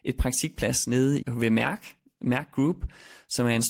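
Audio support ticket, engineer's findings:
Speech turns rough and watery from 1.57 s to end, with high-frequency loss; bottom reached for about 1.24 s. Call bitrate drop: bandwidth estimate fell, encoder coding coarsely, consistent with roughly 32 kbps dropping to 15 kbps.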